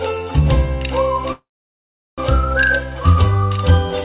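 At 1.32 s the sound stretches into a short fading buzz, then drops to silence for about 0.74 s before resuming at 2.20 s exactly where it stopped, with nothing lost but everything after running about 0.86 s late. This call audio freeze is likely from delayed packets emptying the jitter buffer, heard through a narrowband call path with nothing above 4 kHz.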